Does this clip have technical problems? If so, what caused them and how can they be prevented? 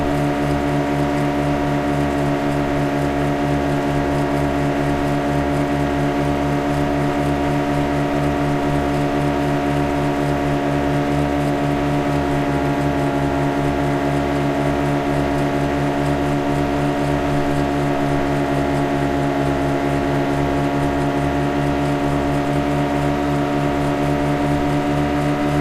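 No, nothing in this recording of sounds points to a technical fault, so there is no cause to trace and nothing to prevent.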